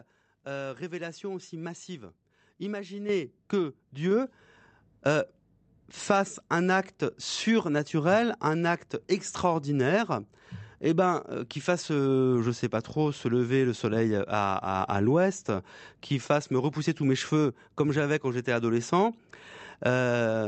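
At 3.09 s and again at 4.11 s the microphone volume is stepped up, by about 8 dB and then about 4 dB. Voice and background noise jump together instantly, unlike a speaker simply talking louder.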